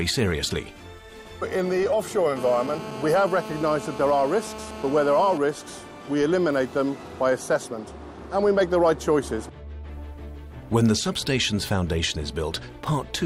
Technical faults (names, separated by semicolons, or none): GSM phone buzz